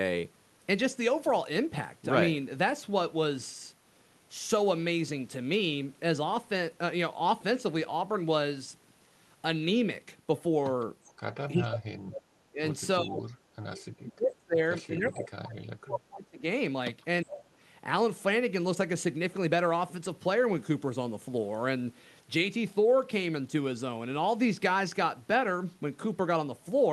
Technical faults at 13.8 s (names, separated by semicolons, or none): echo leak